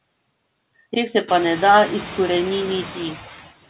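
Noise suppressor artifacts run through the whole clip: the suppressor pulls steady-noise bands down by about 20 dB between words and lets them back up beneath speech. Unlike a noise gate, which switches the whole signal, it acts band by band, so some noise survives under speech. The room noise that rises by roughly 20 dB around 1.5 s makes this dipping easier to hear, and the G.711 call audio stops at 4 kHz.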